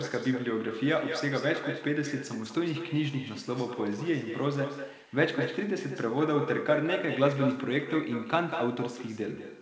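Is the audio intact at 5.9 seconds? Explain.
No. At 5.9 seconds, as throughout the clip, there is echo with no canceller. The far end replays the speech, about 9 dB quieter, roughly a fifth of a second later.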